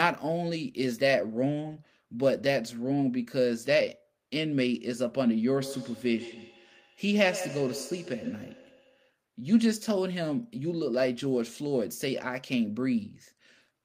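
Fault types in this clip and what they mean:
Feedback echo between two devices, 5.57 to 9.18 s: the speech comes back at a steady gap of roughly 150 ms, with the loudest return about 12 dB below the direct speech. This happens when two devices in one room share a call. One plays what the other's microphone sent, and that microphone picks it up again. Each device's echo canceller only removes its own playback, so the returning sound slips through.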